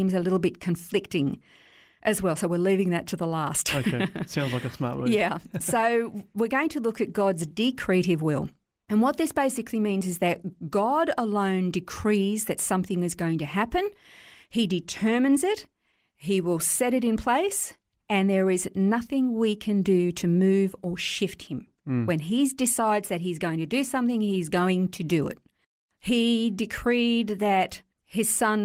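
No faults in this speech clip; the Opus voice compression, which points to about 24 kbps in hybrid fullband mode, leaves only light coding traces.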